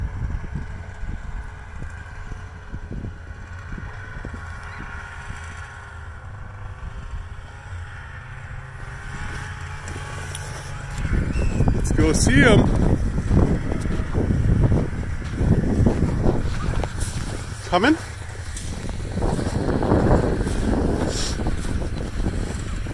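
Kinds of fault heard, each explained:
No faults turn up anywhere in this one, so there's nothing to list.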